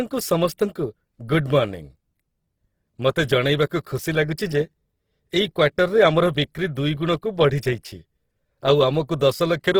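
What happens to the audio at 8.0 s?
At 8.0 s the speech carries the same damage heard across the whole clip: a grainy, rough texture where tonal parts of the signal turn noisy, though the top end still reaches about 20.1 kHz. This is likely Opus compression in its CELT music mode, at a low rate consistent with roughly 16 kbps. Short of bits, the encoder preserves each band's energy but fills the detail with folded copies of lower bands or noise, so the artefact is plainly audible.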